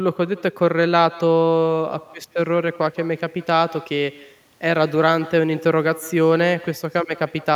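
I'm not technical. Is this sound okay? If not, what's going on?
No. Echo with no canceller runs through the whole clip, from start to finish. Every bit of speech is followed, roughly 150 milliseconds later, by a fainter, thinner copy of itself. That happens when the person at the other end has the call on a loudspeaker: their microphone picks up your voice coming out of it and sends it straight back down the line, and nothing in the system removes that returning copy.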